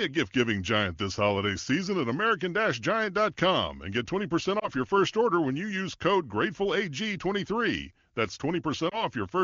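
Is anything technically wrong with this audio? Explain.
Yes. Lost AMR speech frames occur at 4.60 to 4.69 s, just before "your first order when", and at 8.89 to 9.03 s. Each time a single 20 ms frame failed its checksum, so the decoder reused the previous pitch and vocal tract settings at lowered gain. The result is a brief dip or warble.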